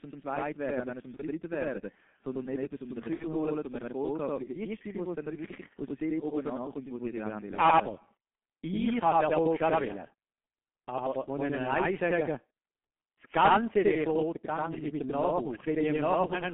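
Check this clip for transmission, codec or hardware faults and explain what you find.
Three faults are present: a doubling from channel delay throughout, G.723.1 coding throughout, and two brief dropouts filled in by the codec's packet loss concealment.

Channel delay (doubling) runs the whole clip. One channel arrives about 93 ms late, which fits a 4096-sample buffer, and the two were summed to mono. The late copy is heard at equal level as a distinct slap or doubling. That separate, level repeat is what distinguishes it from room reverb or comb-filter colouring.

G.723.1 codec damage is also present throughout, and it is heavy. The speech is confined to roughly 200 Hz to 3.4 kHz and sounds muffled and hoarse, with smeared consonants. The sound points to a rate near 6.3 kbit/s coded in 30 ms frames, with a slowly updated voice model. Unlike simple low-pass filtering, the hoarse, blurred texture comes from the coding itself.

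VoIP packet loss concealed by the speech codec occurs at 1.16 to 1.22 s, about 30 ms long, and at 3.14 to 3.24 s, about 60 ms long. The lengths point to one and two lost frames. The decoder extended its last pitch and filter at falling gain, so each gap becomes a fading buzzy tone or coloured noise rather than silence. The speech stays degraded briefly after packets resume.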